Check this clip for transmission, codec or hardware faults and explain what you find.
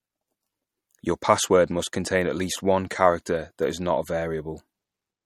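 One codec fault runs through the whole clip. MP3 compression, likely: weak spectral lines drop in and out between frames, giving plainly audible watery swirl, with nothing above 18.1 kHz, at roughly 48 kbps.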